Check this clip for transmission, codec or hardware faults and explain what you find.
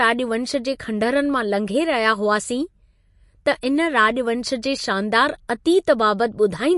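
There is one fault, running through the whole clip. The speech sounds watery and swirly, with clearly audible damage and nothing above 11.3 kHz. This is likely MP3 compression at a starved bitrate, which fits about 48 kbps: the encoder cut the treble and let weak frequency lines flicker between frames.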